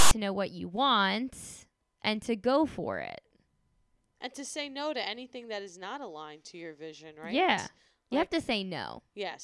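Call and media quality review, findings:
File tags played as audio, 0.00–0.11 s, before "know what you want": hard-edged, lopsided rasp from text metadata decoded as samples. Not full-scale white noise, so not embedded compressed data.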